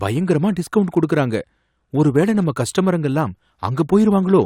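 Nothing technically wrong turns up anywhere in this short speech recording, so there are no faults to time or explain.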